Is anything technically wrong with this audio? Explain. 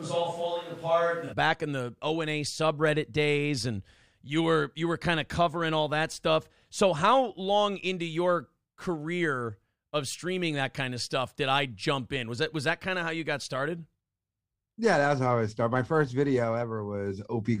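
Yes. From the start of the clip until 1.31 s the speech sounds roomy, hollow and thin in the bass. It is about 5 dB quieter, with room noise roughly 30 dB below it, then abruptly becomes close and full. This is likely a switch to a distant microphone, with the close microphone's signal missing for that opening stretch.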